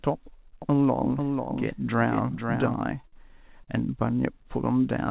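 A doubled audio track runs from 0.62 to 2.74 s. A second full-band copy of the speech trails the original by roughly half a second at a somewhat lower level, about 5 dB down. It is dry, with no decay or room colour, and it cuts in and out abruptly. It is likely a second capture through a slower path, mixed back in.

Short stalls from late packets follow at 3.01 to 3.05 s, 3.08 to 3.14 s and 3.64 to 3.69 s, holding the sound for 27, 49 and 35 ms respectively. Each time the jitter buffer ran dry, the receiver stretched the last sound until the packet arrived, then resumed where it left off. Nothing is lost, but the speech briefly hangs with a slight buzz or dip, and the playout delay grows by the same amounts.

Throughout, the call path leaves nothing above 4 kHz, which fits a G.711 A-law codec at 64 kbps.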